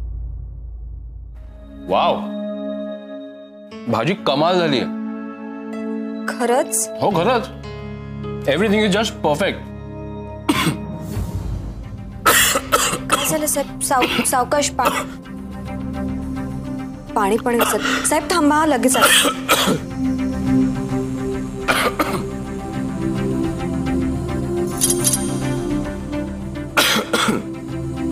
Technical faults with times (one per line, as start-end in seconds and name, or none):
20.42-23.54 mains buzz